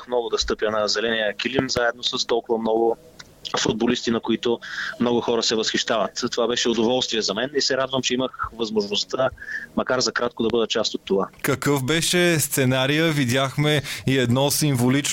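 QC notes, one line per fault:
1.59–1.79 s, loud pop: two sharp pops in quick succession, roughly 20 dB above the sound, which carries on underneath. Likely a voltage step from a plug, switch or static.
3.69–3.92 s, loud pop: another double pop, about 15 dB over the sound.
10.50–10.52 s, loud pop: a single short thump, again about 15 dB above the level.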